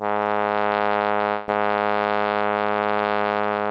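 A music clip in which, from 1.30 to 1.50 s, the sound smears into a buzzy or hissy, fading continuation for about 180 ms before the music resumes further along, with that stretch never heard. This is likely a long network dropout, the receiver padding the gap by stretching out the last sound it had. Across the whole clip, which passed through a call codec, nothing sits above 8 kHz, consistent with G.722.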